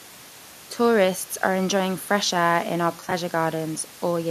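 Right after "fresh air in our", from about 3.00 to 3.12 s, there's AAC frame loss with concealment. Around 60 ms went missing in short scattered gaps, and the decoder patched each from the last good spectrum, so that stretch turns briefly smeared and noisy.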